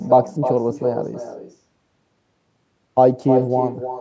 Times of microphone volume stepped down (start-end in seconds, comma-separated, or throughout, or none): none